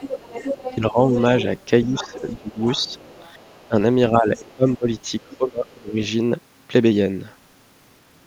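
From 0.00 to 3.68 s a second voice sits under the talker, around 15 dB quieter. This is the other side's voice leaking through, likely loudspeaker echo the echo canceller failed to remove. It returns more faintly, roughly 25 dB down, from 4.36 to 5.76 s.

The talker's own speech dips by around 10 dB at 0.79–1.14 s, about 15 dB at 1.84–2.93 s, and as much as 20 dB across 3.68–5.96 s, with about a second affected in that last stretch. This is speech suppressed in double talk, likely the canceller turning down both voices while they overlapped.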